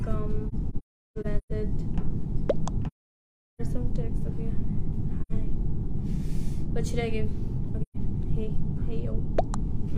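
AAC frame loss with muting first hits between 0.48 and 1.52 s as scattered gaps, the longest around 0.4 s. Further holes follow at 2.87 to 3.61 s, 5.21 to 5.32 s and 7.82 to 7.96 s. Lost frames decode as silence. Overlapping windows fade each hole's edges.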